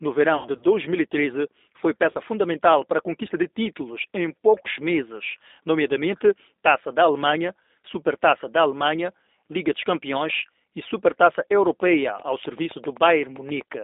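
Speech carried through a G.729 codec: the band runs from 250 Hz to 3.7 kHz, and the rough, synthetic texture fits an 8 kbit/s pulse-based speech coder. VoIP packet loss concealed by the speech codec occurs at 0.37–0.64 s, where the decoder extrapolates from its last pitch and filter into a fading buzzy tone or coloured noise, and again at 2.11–2.18 s, just before "fundamental para a conquista".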